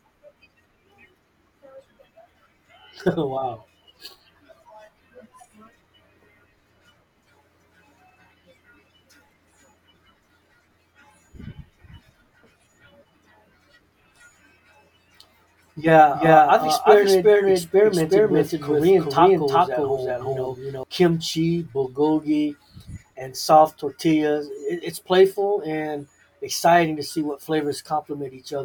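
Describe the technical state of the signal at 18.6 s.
The speech at 18.6 s is caught in a doubled audio track, running from 16.13 to 20.83 s and likely caused by the signal reaching the mix twice, once through a slower path. A second full-band copy trails the original by roughly 400 ms at about the same level, with no decay or room colour, so each syllable repeats as a dry, stuttering echo. The copy cuts off abruptly just before "kimchi bulgogi and soft".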